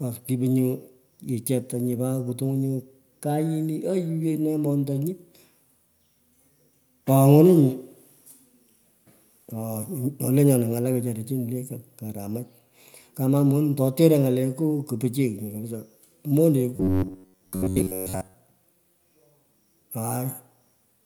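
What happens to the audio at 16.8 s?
From 16.76 to 18.35 s the speech goes robotic: a rigid, metallic buzz around 93.8 Hz, likely from a short buffer (about 10.7 ms) repeating for roughly 70% of the span while real audio gets skipped.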